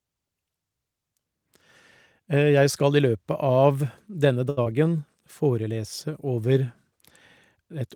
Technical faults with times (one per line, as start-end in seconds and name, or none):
4.49-4.59 short stall from a late packet
4.63-4.68 short concealed packet loss